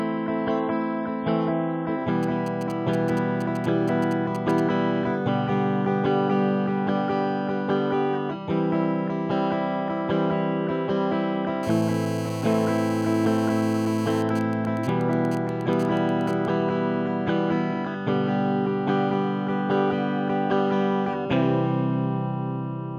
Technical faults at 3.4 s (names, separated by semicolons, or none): GSM signalling bursts